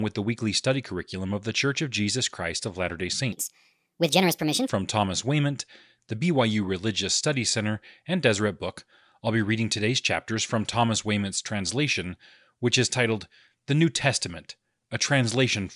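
A short speech recording, and from 3.32 to 4.69 s it runs at the wrong sample rate. The voice jumps up about 6.5 semitones and hurries along at 1.45 times normal speed, then drops back to normal. Pitch and tempo shift together like that because the samples are being played faster than they were captured, with no conversion. The ratio fits audio recorded at 22 kHz but played back at 32 kHz.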